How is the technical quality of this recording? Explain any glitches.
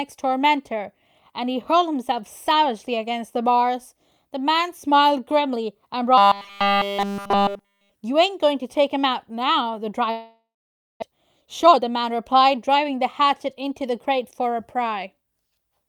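The recording has three glitches, all from about 6 s onward.

From 6.18 to 7.95 s the speech turns into a rigid, metallic robotic sound at 200 Hz. Likely cause: repeating a tiny buffer, which fits about 5 ms.

From 10.11 to 11.04 s there is a long network dropout, likely. A fading fill gives way to 550 ms of silence. About 600 ms of audio never returns.

From 11.11 to 12.85 s a jitter buffer speed-up plays the speech at 116% speed, same pitch. Roughly a third of a second is trimmed to cut delay.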